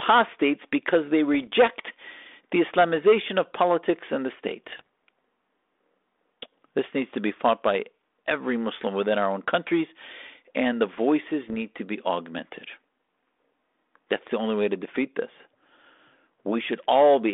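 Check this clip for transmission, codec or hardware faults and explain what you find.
Four short rough bursts break into the speech, all from bit errors on an ADPCM link. The narrow telephone band, roughly 250 Hz to 3.6 kHz, with light coding grain, fits a 32 kbit/s G.726 line.

At 1.34 to 1.50 s after "because they", at 4.69 to 4.87 s, at 8.74 to 8.81 s between "be fought by every" and "within our own countries", and at 11.48 to 11.62 s between "and the voices" and "to be augmented", there are pops, rasping crackle and brief jumps in level. Scattered flipped bits, a few per thousand, corrupt the decoder's step size and predictor, so each error rings on for milliseconds.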